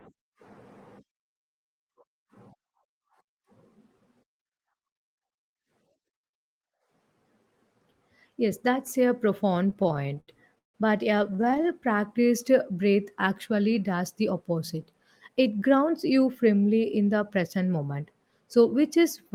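Speech that drags and stutters from 9.67 to 10.76 s, just after "that's a", and again from 11.24 to 11.70 s. These are repeated stalls (stutter): late packets kept emptying the jitter buffer, and the receiver stretched the last sound to fill the gaps, the longest about 157 ms. From 14.74 to 15.29 s, after "actually does the", the speech sounds hurried at an unchanged pitch, running at 106% speed. This is a jitter buffer speed-up, trimming a few tens of milliseconds of pitch periods to cut excess delay.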